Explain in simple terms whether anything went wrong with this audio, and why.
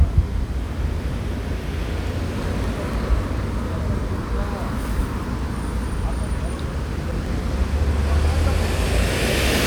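CD scratch ticks appear from 2.49 to 3.38 s and 6.82 to 7.56 s: brief clicks of a few milliseconds, repeating with each disc turn where the damaged data couldn't be rebuilt.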